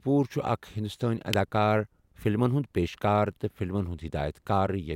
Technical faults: electrical switching spike

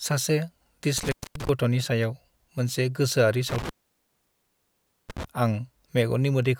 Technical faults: intermittent contact

